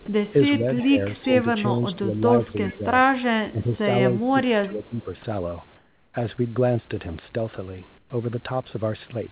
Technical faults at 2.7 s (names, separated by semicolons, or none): speech suppressed in double talk; echo leak